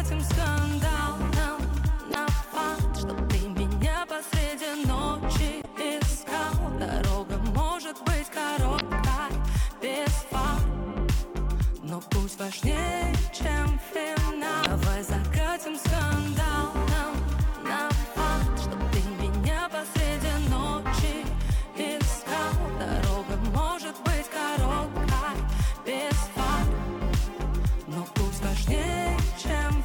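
Four brief bursts of damaged data in a compressed stream occur, at 2.10, 5.61, 8.77 and 14.62 s. Each lasts roughly 55 ms. Corrupt bytes make the decoder misread frames and lose sync until it finds a valid header. Each break sounds like a short chirp, squawk, click or hole.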